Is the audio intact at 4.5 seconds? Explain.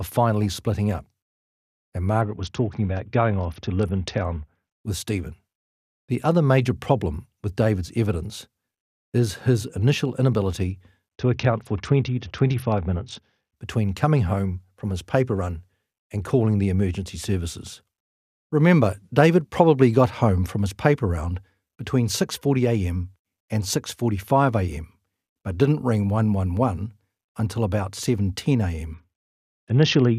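No, at 4.5 seconds the speech sounds dull and gritty, with treble missing: a Bluetooth SBC bit pool drop from 2.21 to 4.74 s, consistent with a bit pool cut from 28 to 7 (about 66 kbps) that starves the upper sub-bands and coarsely quantises the rest.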